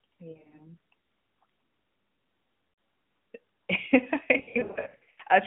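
Lost AMR speech frames show up at 0.32 to 0.67 s, 2.70 to 2.78 s and 4.38 to 5.21 s. The decoder fills each gap with a fading copy of the last good frame, so the speech warbles, smears and dips.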